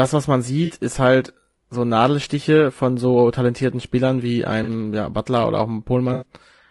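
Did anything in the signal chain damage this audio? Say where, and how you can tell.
Yes. At the codec stage, the speech sounds rough and grainy throughout, with noise between harmonics, likely low-delay AAC compression at around 32 kbps, which fits AAC-ELD.

At the network stage, AAC frame loss with concealment leaves smeared, noisy patches at 0.65 s after "was man", 4.63 s, and 6.13 s after "oder auch", lasting 40 to 80 ms.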